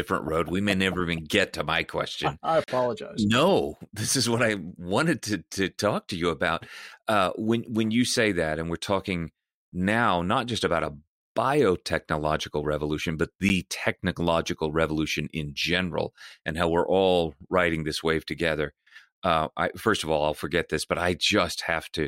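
Blocks of digital silence occur at 2.64 to 2.68 s and at 13.49 s, where samples were zeroed, likely because the output buffer went unfilled in time. The 40 ms gap is a short hole; the 10 ms gap, between "a biotechnological revolution but" and "technological revolution in general", is a tick.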